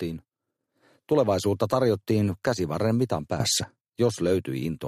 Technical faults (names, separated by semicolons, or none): sudden gain jump